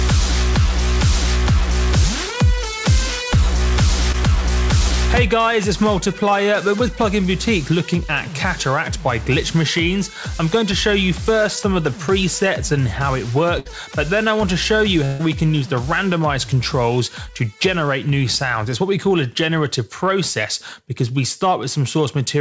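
At 4.12 to 4.16 s there is a short concealed packet loss: about 20 ms of audio never arrived, and the receiver covered 17 ms by extending the preceding sound before blending back. It is heard as a brief smear, and shows on a spectrogram as a short stretch of copied, blurred texture.

Bursts of packet loss follow at 13.60 to 13.67 s and 15.05 to 15.21 s, replacing about 60 ms and 140 ms with 57 ms and 139 ms of synthesized continuation that fades, as a held buzz or hiss, before the sound jumps ahead. A spectrogram shows repeated, decaying patterns, then an abrupt resumption. Throughout, the call path leaves nothing above 8 kHz, which fits G.722.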